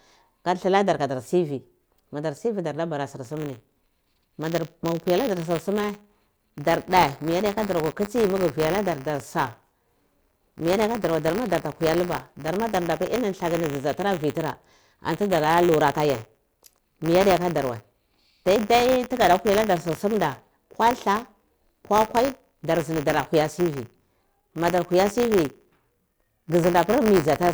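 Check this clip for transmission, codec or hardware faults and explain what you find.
One hardware fault is present. From 3.24 s to the end there is buffer tearing: the writing and reading positions in the playback buffer have slipped, so each 10 ms period carries a small slice of audio about 20 ms old between two hard joins. It is heard as a steady 100 Hz robotic buzz, present only with sound. On a waveform, regular discontinuities appear every 10 ms. On a spectrogram, harmonic stripes spaced 100 Hz apart show.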